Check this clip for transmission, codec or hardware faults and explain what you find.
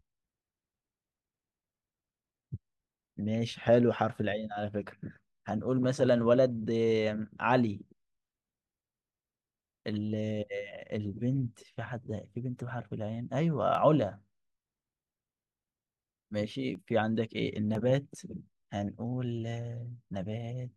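One hardware fault appears in the speech: periodic USB or driver dropouts from 13.75 to 17.75 s. About five sub-millisecond skips recur exactly once per second, heard as regular ticks, unlike random network glitches.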